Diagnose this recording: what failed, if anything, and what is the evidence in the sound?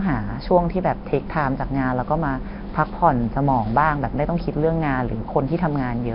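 Codec stage, throughout: rough hissy halo, underwater smear, nothing above 5.3 kHz. Likely heavy Nellymoser compression, starved bands filled with noise, which fits around 22 kbps.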